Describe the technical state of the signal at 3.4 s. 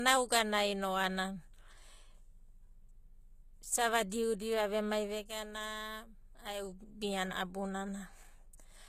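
At 3.4 s, as throughout the clip, the speech has nothing above 14.9 kHz and carries the smeared, swirly artefacts of very low-bitrate coding. This is likely low-bitrate audio saved at a high bitrate: the damage fits a 20 kbit/s HE-AAC encode later re-encoded as high-rate MP3, which cannot restore what was discarded.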